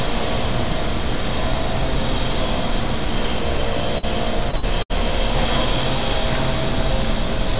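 A burst of packet loss hits this everyday sound at 3.98 s and runs to 4.05 s. A short run of audio never arrived in time, so the receiver filled about 47 ms by extending the last bit of sound and letting it fade. That shows up as a brief held, dimming smear. When the audio picks up again, about 40 ms of the original has been skipped, and the sound lands slightly further along than it should.

Repeated packet loss, giving a robotic sound, follows from 4.51 s to 5.00 s. Losses keep recurring across this half-second, with four separate holes, the longest about 70 ms. Each hole is patched by stretching what came just before, and roughly 31% of the stretch is synthetic fill, about 150 ms in total. About 160 ms of real sound goes missing. The result is choppy and robotic, with fragments dropping out between the repeated patches. The whole clip stops at 4 kHz, which fits a 64 kbps G.711 telephone codec.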